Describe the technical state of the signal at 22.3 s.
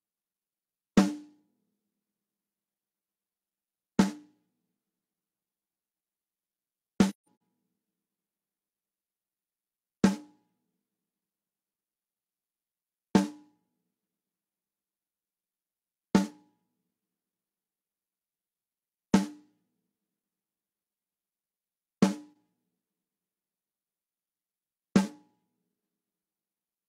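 A brief, soft-edged dropout at 22.34 s fades the sound out and back in. This is AAC frame loss with muting: about 43 ms of spectrum was zeroed, fitting one lost frame.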